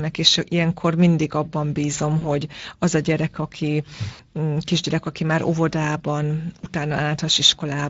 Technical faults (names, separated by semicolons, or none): Speex codec; VoIP packet loss concealed by the speech codec